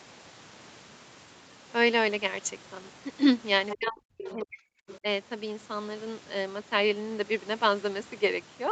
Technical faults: other side's voice leaking through; speech suppressed in double talk

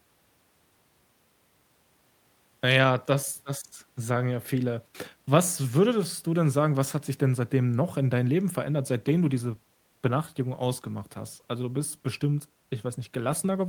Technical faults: call bitrate drop

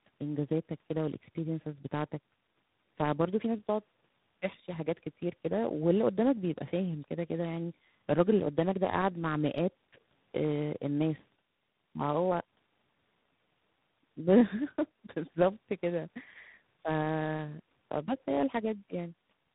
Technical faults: tandem speech coding

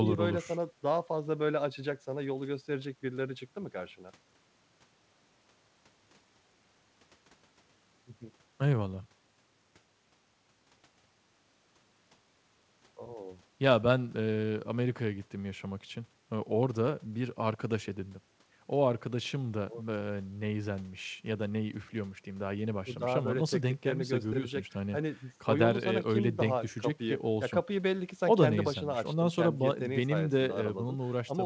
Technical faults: none

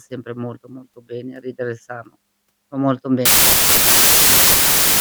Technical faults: wrong sample width

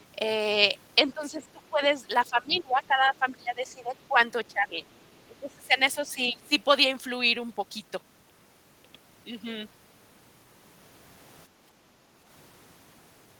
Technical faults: speech suppressed in double talk; other side's voice leaking through; background gated by the echo canceller

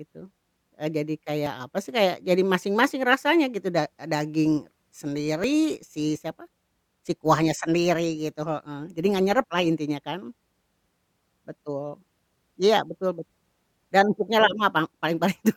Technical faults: overlap between stream segments

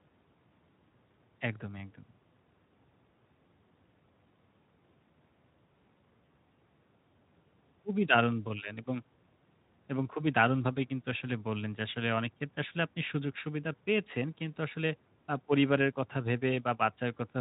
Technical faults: none

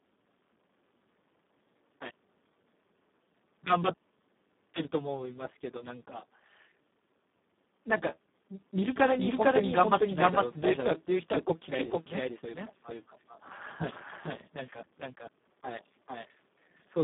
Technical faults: Speex codec; doubled audio track

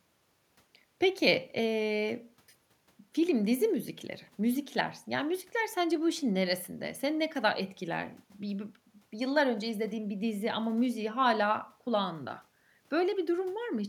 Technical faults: none

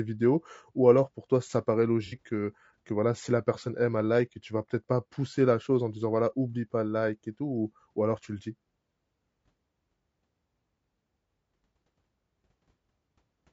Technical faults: low-delay AAC compression; AAC frame loss with concealment

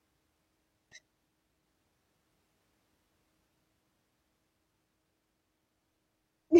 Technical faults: damaged data in a compressed stream

